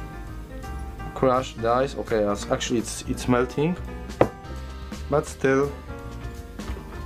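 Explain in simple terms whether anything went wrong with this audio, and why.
Nothing went wrong; the audio sounds fine throughout.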